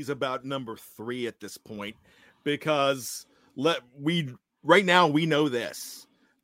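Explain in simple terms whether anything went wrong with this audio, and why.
Nothing went wrong; no faults can be heard.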